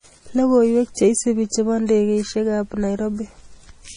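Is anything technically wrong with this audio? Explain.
Yes. Throughout the speech there is heavy damage consistent with MP3 compression, at a bitrate low enough to fit roughly 32 kbps. Short of bits, the encoder likely discarded everything above 10.5 kHz and zeroed weak frequency lines, which flicker on and off between frames. The result sounds watery and swirly, with dull treble and smeared attacks. A spectrogram shows a hard, flat ceiling at 10.5 kHz and patchy, blocky holes below it.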